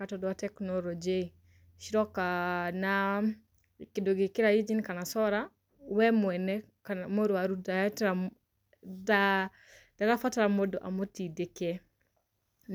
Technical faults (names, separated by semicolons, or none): none